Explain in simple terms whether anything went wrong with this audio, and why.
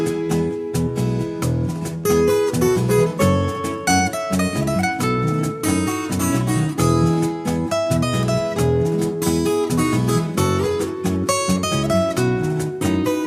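Nothing went wrong here: no dropouts, glitches, distortion or other audible faults anywhere in the recording.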